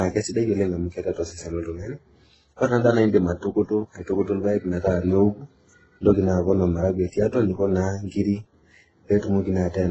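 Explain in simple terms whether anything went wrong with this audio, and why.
Yes, something went wrong for the whole clip. The speech sounds dull, with nothing above 8 kHz. Swirly, watery smearing is layered with a harsher grainy edge. That mix likely comes from transcoding between lossy codecs, where each squeezing step added its own damage.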